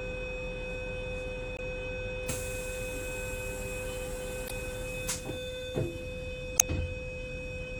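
Brief glitches break through at 1.56 to 1.60 s, 4.46 to 4.51 s and 6.56 to 6.62 s: damaged data in a compressed stream, where corrupted bytes make the decoder misread frames and lose sync.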